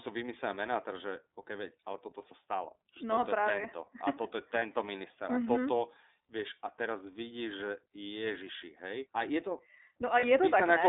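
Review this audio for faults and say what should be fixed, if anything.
The whole clip runs through the iLBC codec. The speech is squeezed into a phone band of roughly 300 Hz to 3.7 kHz and has that slightly rough, synthetic edge, which fits iLBC's 13.33 kbps mode with 30 ms frames. The damage is plainly audible throughout.

There are also lost iLBC frames, one 30 ms frame each time, at 4.59 s and 10.2 s. The decoder covers each hole by repeating the last pitch cycle with some noise mixed in, so you get a brief held, buzzy vowel. Since iLBC codes each frame independently, it snaps back right after.

To prevent this, keep the call on a wideband codec and a cleaner network path, or add forward error correction or a jitter buffer so single packets don't drop out.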